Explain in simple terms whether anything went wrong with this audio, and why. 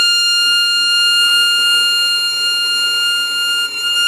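Nothing went wrong with the recording: I hear no technical faults anywhere in it.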